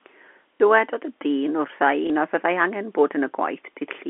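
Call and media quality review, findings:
Packet loss with last packet repeated: one packet's worth of audio, about 30 ms, dropped at 0.58 s and 2.07–2.10 s, each concealed by replaying the previous packet. Small blip at each.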